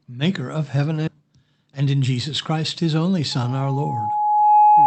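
Speech carried over a call link. The top end stops near 8 kHz, which fits an Opus wideband setting. Right after "maker of heaven" there is a skip ahead at 1.07 to 1.15 s. Roughly 0.4 s of speech is gone. The two sides join almost directly, with only a very short gap. That stretch was dropped while later audio was already queued, so playback jumped forward and the delay shrank by about the same amount. Next, from 1.66 to 1.95 s, the speech runs hurried but keeps its pitch. This is a jitter buffer speed-up at 118 percent. The buffer held more audio than its target. To catch up, it cut short pieces of one or a few pitch periods, many times in a row. Around 70 ms was removed in total. The rhythm tightens audibly over that span. Just after "his only", at 3.31 s, a loudspeaker feedback squeal begins and lasts to the end. It is a single 840 Hz tone. It swells over about a second and a half and ends up roughly 10 dB above the speech. 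A microphone was picking up the loudspeaker it fed, and at 840 Hz the loop gain passed one. That tone kept growing on its own until it dominated the sound.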